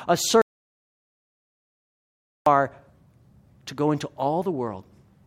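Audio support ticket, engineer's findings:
Audio dropout to silence, 0.42–2.46 s: input likely lost at device or link, silence written meanwhile. Speech cuts mid-flow; 2.05 s of dead silence, no room tone.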